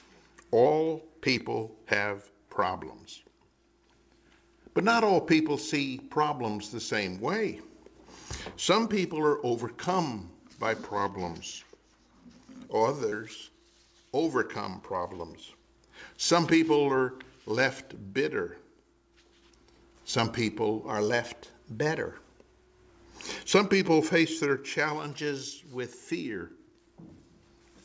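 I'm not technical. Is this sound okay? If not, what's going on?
No. Four times the sound briefly runs at the wrong speed: from 0.66 to 1.37 s, 20.88 to 22.90 s and 25.08 to 26.12 s it plays about 6.5% fast and rises about a semitone, and from 10.78 to 12.37 s it plays about 6.5% slow and drops about a semitone. This is most likely a drift correction step, where software keeping two clocks in line nudged the playback rate to adjust its buffer.

At 13.10 to 13.13 s there's a different, much tinier glitch: a short concealed packet loss. About 20 ms of audio never arrived, and the receiver patched the gap by stretching out the sound just before it, so you hear a quick smear or wobble rather than a change in pitch. The drift steps last from under a second to about two seconds and shift the whole tone up or down, while this is a single instant with no pitch change. The call line also removes everything above 8 kHz, which is expected for this type of connection.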